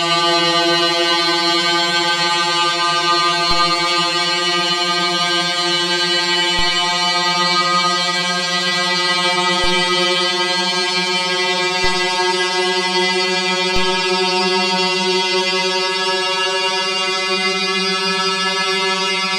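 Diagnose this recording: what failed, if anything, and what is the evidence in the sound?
A DC step fault at the converter: low thumps at 3.51, 6.59, 9.64, 11.84 and 13.76 s. The zero line jumps about 14 dB below full scale, about 12 dB the last time, then decays away through a 2 Hz high-pass.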